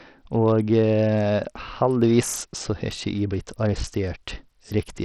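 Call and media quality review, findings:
Bluetooth SBC compression artefacts throughout the speech. Nothing above 14.3 kHz. Gritty noise and aliasing ride on the sound. Likely an SBC link with a small bit pool, which fits a 64 kbps stream. Top sub-bands get no bits. Lower bands are coarsely quantised.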